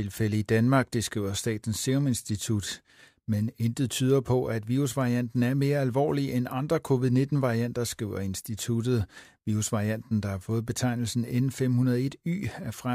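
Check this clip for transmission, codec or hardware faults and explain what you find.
No faults detected in this clip.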